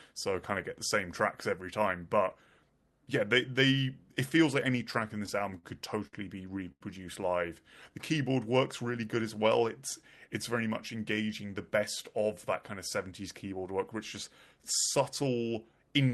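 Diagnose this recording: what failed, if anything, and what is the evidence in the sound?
Network and jitter-buffer stage: repeated stalls (stutter) from 4.91 to 5.65 s, just after "it feels like any". The buffer ran dry six times and the receiver continued the last sound, filling 96 ms, the longest gap 48 ms. The waveform shows repeated cycles with brief fades, and the spectrogram shows harmonics frozen into short flat stretches.

Same stage: a short stall from a late packet at 6.07 to 6.15 s, holding sound for 57 ms, and again at 6.72 to 6.82 s for 87 ms. Nothing is lost, but each sound lingers with a faint buzz or dip. On a spectrogram the harmonics run flat and unchanging, and the waveform repeats one cycle shape.

Jitter buffer speed-up from 10.03 to 11.45 s, ending just before "the best of that". The buffer had built up extra delay, so the receiver cut about 70 ms of pitch-period pieces, running the audio at 105% at the same pitch. 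It sounds slightly hurried. On the spectrogram, syllables are a little shorter and the pitch contours are unchanged. The waveform shows tighter syllable spacing. The Opus call path's 12 kHz upper limit is visible throughout as the top edge of the spectrogram.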